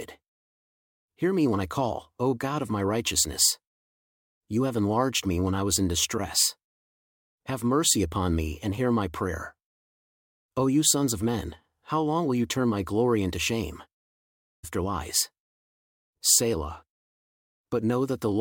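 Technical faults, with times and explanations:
14.63–14.65 s, stream segment skipped: a brief blip, after which the speech jumps ahead so that part of the talk is missing and the flow resumes abruptly. This is likely one segment of a segmented stream failing to load, with the player moving straight on to the next.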